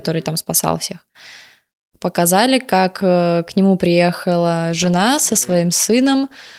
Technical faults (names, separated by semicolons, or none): call bitrate drop